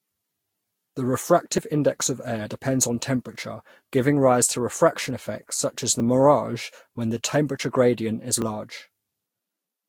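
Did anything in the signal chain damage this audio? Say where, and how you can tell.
Yes. At the codec stage, the speech sounds swirly, smeared and hollow throughout. This is likely generation loss from about four lossy re-encodes, fitting Vorbis near 62 kbit/s.

At the driver or buffer stage, small jumps ahead, without silence, occur at 1.58 s (about 30 ms lost), 6.0 s and 8.42 s (about 10 ms each). These are likely dropped buffers from overruns.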